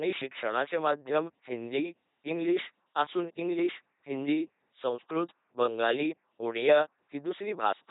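Speech processed by an LPC-10 vocoder throughout, heavily degraded. Each instant is resynthesised from a ten-pole filter excited by either a pulse train or noise, giving a buzzing, mechanical robot voice with nothing above 3.8 kHz, which fits a 2.4 kbit/s LPC-10 stream.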